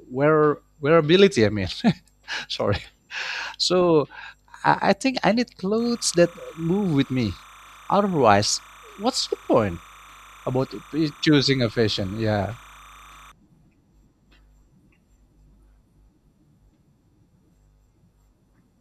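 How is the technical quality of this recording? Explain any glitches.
The recording has one clear glitch. From 5.79 to 13.32 s, just after "think I need", there is timecode bleed. Linear timecode from a nearby track or cable has leaked into the audio. The code is a square wave flipping between two pitches, around 1 and 2 kHz. Its pattern repeats 30 times a second, which fits 30-frame timecode. It sits well under the speech, roughly 25 dB down. It sounds like a steady, chirping warble behind the speech.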